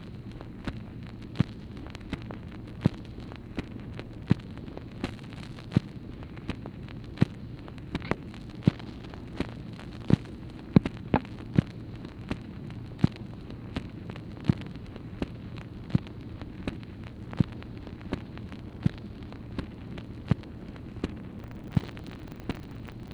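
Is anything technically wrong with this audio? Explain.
Yes. From 21.36 s to the end, buffer tearing sets in. The writer and the reader of the playback ring buffer have slipped. Each period mixes in roughly a fifth of audio from about 70 ms earlier, with hard joins. This gives a robotic 25 Hz buzz.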